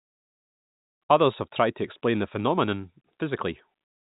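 No technical faults can be heard in this speech, which comes through the telephone-band G.711 coding with nothing above about 3.8 kHz.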